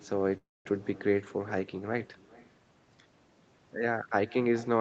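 Echo with no canceller runs through the whole clip: the far end played the call over a loudspeaker and its microphone picked it back up uncancelled, so every phrase returns roughly 0.4 s later as a faint, thin shadow about 23 dB below the speech.

A call audio freeze from 0.37 to 0.67 s, likely from delayed packets emptying the jitter buffer, brings a brief fading continuation of the last sound and then about 200 ms of silence. When the audio resumes, nothing is lost, but everything after it now runs about 0.28 s late.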